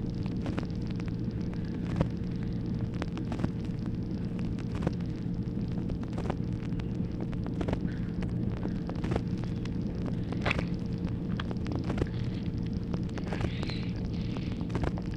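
Nothing stood out on listening.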